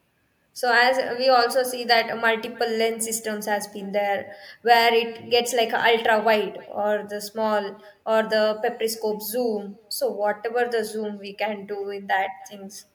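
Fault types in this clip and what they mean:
Echo with no canceller: the far end plays the call through a loudspeaker and its microphone feeds it back with nothing removing it, so throughout this speech a faint, thin copy trails every phrase by around a third of a second, about 28 dB below the talker.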